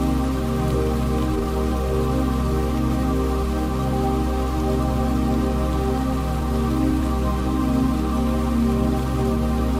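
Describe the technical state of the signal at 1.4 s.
A jitter buffer speed-up spans 1.33 to 1.46 s. Cutting short pitch-period pieces, about 100 ms in all, makes the sound rush at 189% speed. Unlike resampling, the pitch stays unchanged.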